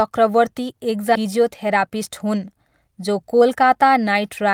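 At 1.15 to 1.17 s the speech lurches abruptly forward, butted straight together with no silence where about 0.4 s of audio has vanished. This is a skip ahead: with later audio already queued, that stretch was dropped in transit or discarded by an overflowing jitter buffer.

From 1.25 to 3.63 s the talking sounds slightly rushed yet keeps its normal pitch, running at 107% of real time. This jitter buffer speed-up comes from the receiver trimming short pitch-period slices again and again, shedding roughly 150 ms of excess buffered delay.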